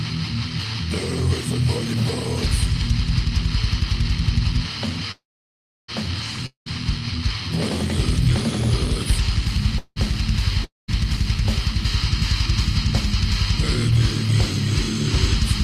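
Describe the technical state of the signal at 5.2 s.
At 5.2 s a call audio freeze is underway (5.11 to 5.90 s): the sound stalls into about 0.67 s of near-silence, likely from delayed packets emptying the jitter buffer, then resumes where it stopped, with nothing lost, unlike a dropout.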